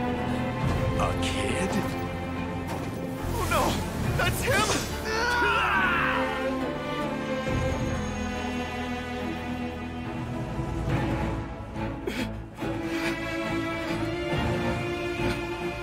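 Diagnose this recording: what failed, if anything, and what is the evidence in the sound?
Nothing failed here; I listened through and couldn't find any trace of trouble at any stage, so there's no fault to point to.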